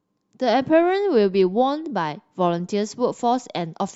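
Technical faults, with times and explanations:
No technical faults can be heard in this speech.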